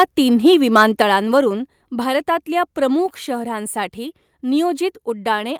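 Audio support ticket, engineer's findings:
Harsh, crackling tops on speech peaks, 0.46–1.02 s, about 3 dB over full scale, roughly 2% of samples flattened. Microphone overload, likely input gain driving the converter past its ceiling.

Abrupt level drop at 1.02 s, voice and background both about 4 dB quieter. Microphone volume stepped down, likely the call software cutting device input gain after the clipping.

Brief crackle again at 1.37–1.39 s, about 1 dB over, roughly 1.5% of samples clipped. Microphone overload, likely because the reduced gain still leaves too little headroom for loud peaks.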